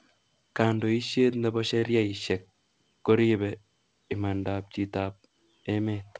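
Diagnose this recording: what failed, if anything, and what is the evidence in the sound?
A short stall from a late packet hit the network and jitter-buffer stage at 1.79 to 1.85 s. A packet arrived late, the buffer ran dry, and the receiver stretched the last speech sound by about 35 ms rather than dropping anything. The delay grew by the same 35 ms, and nothing is lost. On a spectrogram the harmonics run flat and smeared across that gap, and the waveform shows near-identical repeated cycles. This sits inside a wideband call path with no content above 8 kHz.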